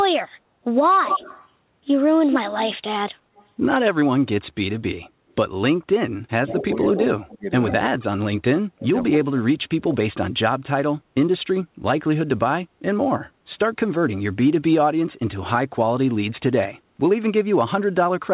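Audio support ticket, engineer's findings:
Echo leak, likely far-end loudspeaker echo canceller underconverged; residual returned at 148 ms delay. Delayed copy of speech audible 1.06–1.48 s at about −5 dB relative to speech, strong. Recurs 3.35–3.46 s, faint, about −35 dB. Again 6.47–6.64 s, about −10 dB, overlapping onset of suppression below. Same 148 ms lag each time points to a stable acoustic path the canceller failed to model.

Speech suppressed in double talk. Likely echo canceller misreading near-end talk as echo during overlap and attenuating both. Near-end speech dips 6.55–7.49 s, deepest drop roughly 25 dB. Further cut 7.77–8.27 s, near 30 dB. Longest and deepest 8.73–10.17 s, around 35 dB, speech pumped down in pieces. About 2.3 seconds affected in total. Band limited to 4 kHz throughout, consistent with G.711 mu-law at 64 kbps.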